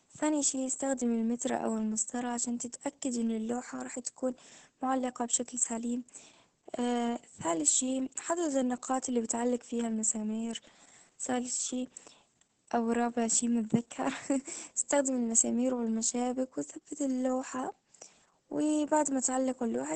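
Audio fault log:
Throughout, Opus voice compression: the speech sounds heavily squashed, with nothing above about 8.7 kHz, so it's muffled, hoarse and a bit robotic. The linear-prediction coder is coding the excitation very coarsely, which fits a bitrate of around 10 kbps.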